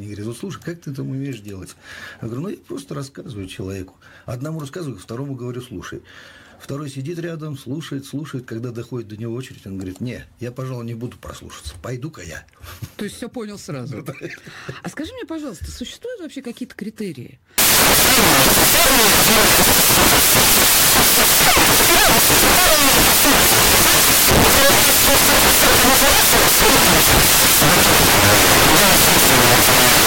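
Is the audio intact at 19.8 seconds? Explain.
No. At 19.8 seconds the audio has samples built from the wrong bytes, a fault running from 17.58 s to the end at 30.07 s. Each sample's bytes are assembled wrongly, so the rapidly changing low bits become the dominant part of every value. The result is loud, harsh broadband noise in place of the original sound.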